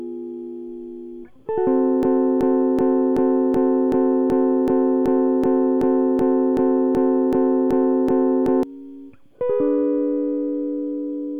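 At 2.03 s the music locks into a broken-record loop. A 0.38 s fragment repeats 17 times until 8.63 s, likely a stalled player resending its buffer.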